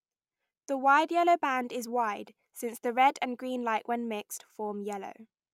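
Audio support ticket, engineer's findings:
Speech signal checked throughout with no audible defect found, so no faulty component identified and no action required.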